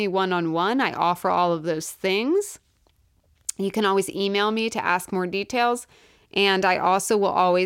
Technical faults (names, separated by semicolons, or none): none